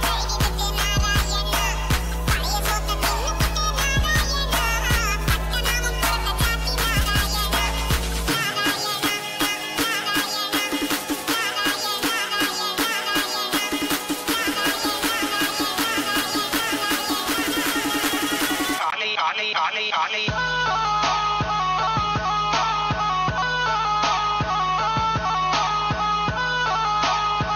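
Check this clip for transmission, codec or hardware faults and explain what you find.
One fault is present. Input switched to a poorer device at 18.90 s, running to the end: after a 20 ms gap, the audio likely comes from a different microphone or headset path. Nothing passes above 6.5 kHz, so the sound turns duller, with a new background noise about 30 dB down and little change in level.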